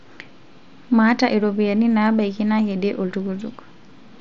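Nothing goes wrong anywhere here; the speech simply comes over a Bluetooth mSBC headset link, so the top end stops at around 7.6 kHz, and there's no fault to point to.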